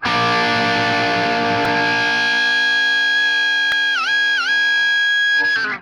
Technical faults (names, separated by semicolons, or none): repeated buffer